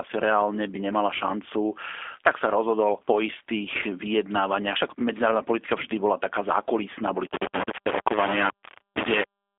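From the start the speech sounds thin, slightly rough and synthetic, confined to a narrow telephone band of roughly 300 Hz to 3.5 kHz, with nothing at all above 3.7 kHz. The damage is plainly audible throughout. This is the G.729 codec, heard here as the G.729A variant at a rate that fits 8 kbit/s. Instead of sending the waveform, it rebuilds each 10 ms stretch from a model of the vocal tract, a pitch estimate and a handful of pulses, which produces the buzzy, artificial edge.

From 7.27 s to the end, a coarse, grainy distortion appears on top of that. It rises and falls with the speech rather than sitting underneath it as a steady hiss, and it is nearly as loud as the speech itself, so quieter parts break up into grit. This is most likely low bit depth without dither. The sound appears to have been rounded to only about 4 bits with no dither to smooth the steps, so the error tracks the signal.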